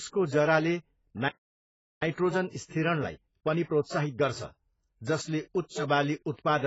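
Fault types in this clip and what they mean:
AAC compression: The whole clip sounds dull and smeared, with a fizzy, warbling edge on sibilants and a hard ceiling at about 7.7 kHz. That's the kind of damage you get when an AAC-LC encoder is starved of bits and has to throw away high bands and coarsely quantise what's left. The damage here is heavy, and it fits a very low bitrate, somewhere around 16 kbps. Likely the codec is the cause, rather than anything in the recording chain.
Playback stall: The speech simply drops out at 1.28 s and stays silent until 2.02 s, a gap of about 0.74 s, before carrying on. That sudden mid-flow silence is what you hear when a player runs dry of data or its output thread gets held up, so nothing reaches the speakers until it recovers. A stall of that sort is the likely explanation here, rather than a pause in the speech itself.
Time-compressed catch-up: Right after the gap, from 2.02 s to 5.02 s, the speech is hurried along at about 1.15 times normal speed with no change in pitch. 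That's the player eating its backlog by snipping out small chunks and cross-fading across the joins. The rush kicks in right at "जसले उच्च", which makes a handy marker for where it begins.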